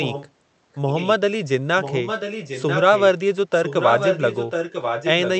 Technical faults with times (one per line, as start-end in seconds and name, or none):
0.01-0.30 echo leak
0.73-1.10 echo leak
1.81-3.04 echo leak
3.53-5.40 echo leak